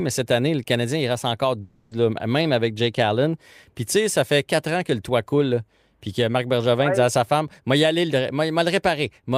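A speech clip with a long network dropout from 1.61 to 1.93 s, after "il reste encore". The last sound is stretched into a fading buzz for about 0.3 s. Speech resumes at "même avec", with that stretch gone. The likely cause is lost network audio.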